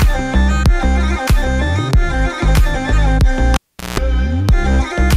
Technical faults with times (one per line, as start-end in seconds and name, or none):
3.54-3.99 cable pulled and plugged in